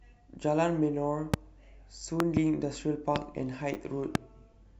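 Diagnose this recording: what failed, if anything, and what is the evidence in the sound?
Loud pops at 1.34 to 1.36 s, 2.20 to 2.39 s (two pops in quick succession), 3.16 to 3.18 s and 4.15 to 4.18 s, each roughly 20 dB above the speech. The speech continues underneath each pop. This points to the analogue wiring stage, likely an intermittent plug, switch or static discharge putting voltage steps into the line. The circuits that follow shape each step into a short, sharp thump.

A repeated buffer at 3.74 to 3.76 s, in the driver or buffer stage. New audio arrived late, so the device replayed its last block twice more. Each repeat is about 10 ms long, which fits a 10 ms buffer, and about 20 ms of real audio is lost. Because the repeated piece is so short, the hard joins are heard as a brief buzzy click rather than a clear stutter.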